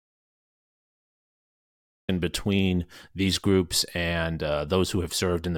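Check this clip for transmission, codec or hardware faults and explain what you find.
One fault is present: an audio dropout to silence at the very start. From 0 to 2.09 s the clip is silent, with no room tone, before speech comes in mid-flow on "between these groups and". The input was likely lost while recording continued writing silence. Unlike a natural pause or noise gate, nothing faint remains.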